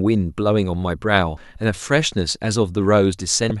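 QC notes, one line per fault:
1.34–1.37 s and 3.48–3.51 s: damaged data in a compressed stream. Each event is a brief disturbance lasting about 30 ms, cutting across the speech. Part of the coded stream is corrupt at these points. The decoder misreads or refuses the frames there. It then loses frame sync and searches for the next valid header. That is why each fault is short rather than a steady noise.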